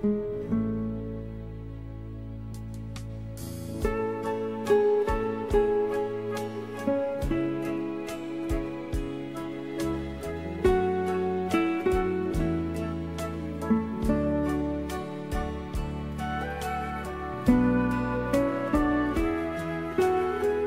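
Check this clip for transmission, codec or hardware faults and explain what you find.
No transmission, codec or hardware faults can be heard anywhere in the clip. There is nothing here that calls for further explanation.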